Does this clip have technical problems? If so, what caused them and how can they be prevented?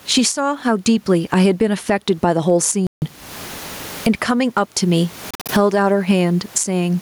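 Yes. Gain pumping runs through the whole clip. The level swings by about 25 dB. The likely cause is microphone gain set far too high, with a fast limiter or compressor clamping each loud moment. The room noise sits about 39 dB below the speech. Loud and quiet syllables end up squashed together. To prevent it, lower the input gain and use gentler, slower compression.

There are two Bluetooth dropouts. The first runs from 2.87 s to 3.03 s. About 0.15 s of sound vanishes. The second spans 5.31 s to 5.50 s. It breaks up into several short holes over about 0.18 s, and the longest gap is about 46 ms. Each time, the speech resumes further along, as if it had kept playing. The likely cause is audio packets reaching the headphones too late and being thrown away. To prevent it, keep the headphones close to the source and clear of radio interference.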